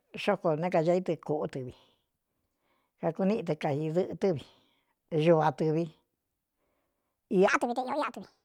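From 7.48 s to the end of the clip at 8.45 s, the speech plays back as a section at the wrong speed, running about 1.55 times faster than it was recorded. Pitch rises with the tempo, roughly seven semitones, so the voice turns thin, high and hurried for the final second. The jump is abrupt, with no ramp. The likely cause is this segment being clocked or resampled at a mismatched rate during editing or playback.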